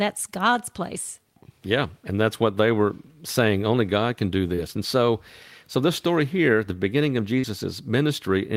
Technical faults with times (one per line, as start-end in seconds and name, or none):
4.55-4.60 short concealed packet loss
7.40-7.45 short concealed packet loss